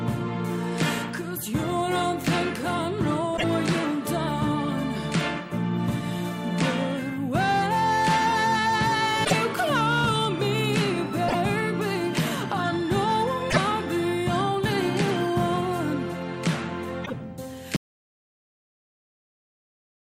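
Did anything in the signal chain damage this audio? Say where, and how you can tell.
Yes. Hard clipping occurs at a gain or converter stage that was driven about 8 dB past full scale. Around two percent of samples are shaved flat at the ceiling throughout, and those squared-off peaks add high harmonics, giving crackle on peaks.

The codec stage shows damaged data in a compressed stream. Corrupt frames at 3.33–3.44, 9.21–9.33, 11.25–11.36, 13.47–13.58 and 17.02–17.13 s made the decoder misread and lose sync while hunting for the next valid header. Each one is heard as a brief chirp, squawk, click or short hole lasting about a tenth of a second.

An audio dropout to silence begins at 17.76 s and runs to the end. The input was likely lost, through a disconnected device or failed link, while recording continued writing silence. The sound stops mid-flow and gives way to silence, with no room tone remaining.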